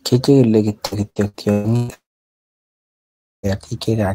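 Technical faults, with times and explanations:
0.85–1.91 s, repeated packet loss (robotic sound): choppy stretch as five gaps, the longest 127 ms, are patched by repeating prior sound, about 40% concealed.
1.94–3.46 s, long network dropout: a brief fading buzz or hiss, then about 1.4 s of near-silence, with 1.5 s of audio never heard; likely a lengthy interruption in arriving packets.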